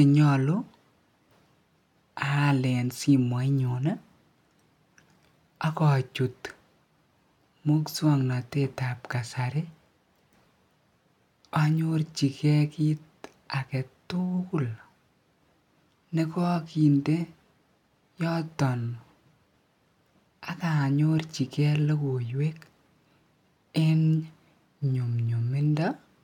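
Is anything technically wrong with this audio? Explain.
No, nothing technically wrong turns up anywhere in this speech recording.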